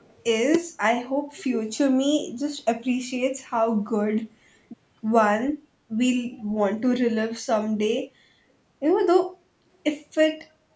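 Right at the start, from 0.00 to 0.18 s, there's a very faint delayed copy of the speech trailing the original by about 295 ms. That's most likely an echo leak, where the far end's echo canceller let some loudspeaker pickup slip back down the line.

Then around 1.49 to 1.55 s the speech briefly sinks, a deep dip lasting only a moment before recovering. It's likely speech suppressed in double talk: with both sides talking at once, the echo canceller couldn't tell them apart and turned everything down.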